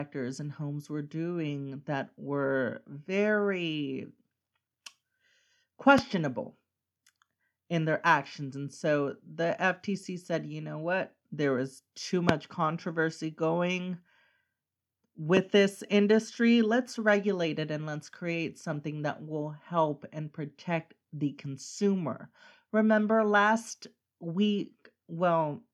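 Three loud pops land at 5.98 s, 12.29 s (after "was too") and 15.37 s (before "this industry let's regulate"). Each is a single sharp thump, likely a voltage spike from a plug or switch, jumping well above the speech.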